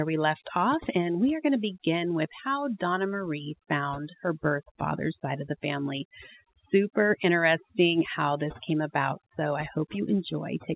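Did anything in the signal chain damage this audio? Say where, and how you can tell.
Yes. The damage is overdone noise removal, across the whole clip. The background drops and breaks up into twinkling specks, because the suppressor gates individual bands that sit near its noise estimate, taking quiet speech detail along.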